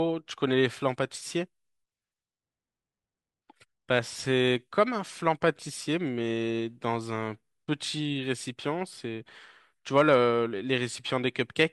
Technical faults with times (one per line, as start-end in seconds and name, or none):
9.98-10.16 hard clipping